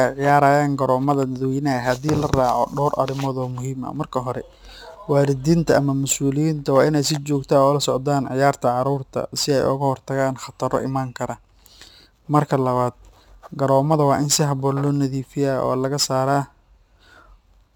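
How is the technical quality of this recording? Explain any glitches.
The recording carries a constant fault across the whole clip: crude rate conversion. The sample rate was changed without a proper filter, by repeating the nearest existing sample, which fits a conversion from 44.1 kHz to 48 kHz. Those repeats recur on a fixed cycle set by the two rates, so the timing error produces shifted, inharmonic copies of the speech, sitting roughly 25 dB below it. This is heard as a gritty, inharmonic fizz riding on the louder and brighter parts of the speech.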